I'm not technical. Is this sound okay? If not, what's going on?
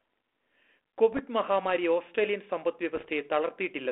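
No. There are two short stretches of bit errors on an ADPCM link, from 1.12 to 1.20 s and from 2.95 to 3.10 s. A small share of the digital data in this cordless-style phone speech was corrupted. Each bad bit throws the decoder's running guess off track, so instead of one clean click you hear a rough, crackly burst with a brief change in loudness that takes a moment to settle. A dropout, by contrast, would leave a gap or silence.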